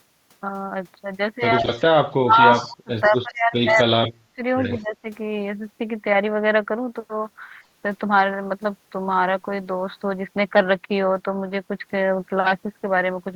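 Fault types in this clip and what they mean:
Speech suppressed in double talk: The voice dips sharply, up to about 40 dB, in patches between 1.6 and 5.06 s. An echo canceller likely ducked it while both sides spoke.
Echo leak: Brief delayed copies of the voice, 136 ms late and about 15 to 35 dB down, appear at 1.77, 2.56, 3.04, 3.69 and 4.75 s. Likely loudspeaker pickup.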